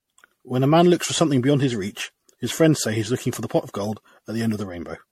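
From start to end the speech sounds swirly and hollow, with smeared consonant attacks and nothing above 16.5 kHz. This is generation loss, likely from around ten MP3 re-encodes at what fits 64 kbit/s, each pass adding fresh quantisation noise on a shifted frame grid.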